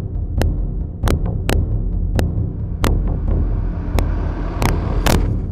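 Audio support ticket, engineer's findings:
Integer overflow: violent cracks on loud peaks at 0.42, 1.08–1.11, 1.50–1.53, 2.19, 2.84–2.87, 3.99, 4.62–4.69 and 5.07–5.15 s. Probable component: fixed-point gain or mix stage with no saturation. Peaks over full scale, by about 0 to 3 dB and worst at the end, wrap to the opposite sign instead of being held. Unlike clipping, these are full-range polarity flips, so they sound much sharper than flattened-top fuzz.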